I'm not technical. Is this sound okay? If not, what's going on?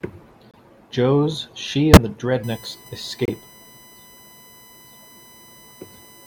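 No. Three short glitches jump out: a faint blip from 0.51 to 0.59 s, a loud squeak from 1.93 to 1.97 s, and another sharp burst from 3.25 to 3.30 s. Each is a corrupt frame decoded. Some of the compressed audio data got damaged, and the player played those scrambled chunks anyway, so sound lands at the wrong pitches for a split second.

From 2.44 s to the end, a thin, steady, high-pitched whine sits under the speech. This is USB whine: electrical noise from a USB connection's regular 1 kHz timing leaks into the audio wiring. Here it is strongest very high up, around 15 kHz.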